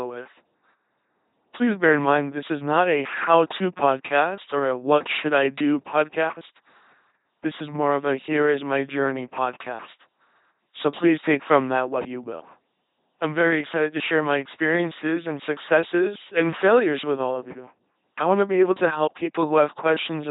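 The speech throughout has a buzzing, mechanical robot quality, with stray buzz or hiss where voiced and unvoiced sounds get confused, and nothing above about 3.9 kHz. This is the LPC-10 vocoder at 2.4 kbit/s. It rebuilds each moment from a simple vocal tract filter driven by either a pulse train or noise, never a mix, and here the damage is heavy. From 15.36 to 17.91 s a steady low tone at 60 Hz sits underneath at a faint level, roughly 35 dB below the speech. This is mains hum, where the power line has leaked into the signal through a ground loop or a nearby transformer.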